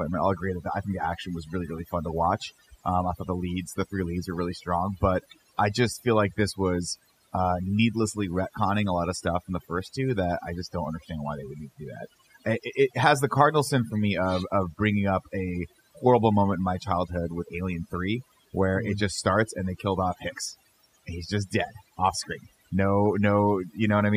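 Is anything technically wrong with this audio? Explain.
Yes. Overdone noise removal affects the whole speech clip. The noise reduction was set too strong. It pushes individual frequency bands down or off wherever they sit near the estimated noise. Quieter parts of the voice vanish with them. The background drops and breaks up into twinkling specks.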